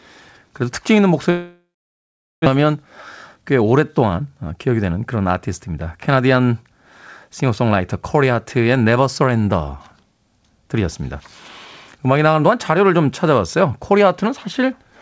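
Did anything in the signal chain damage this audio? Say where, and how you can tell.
Yes. From 1.30 to 2.48 s there's a long network dropout: the last sound smears into a fading buzz, then about 780 ms of silence. Roughly a second of speech is simply gone when it resumes. That's likely a network outage that the receiver papered over with concealment.

Right after, the jitter buffer speed-up kicks in: 2.56 to 2.86 s runs about 11% fast, then 3.36 to 4.10 s about 9% fast, with pitch unchanged. The receiver trimmed pitch-period chunks, around 40 and 70 ms, to drain the backlog that built up after the dropout.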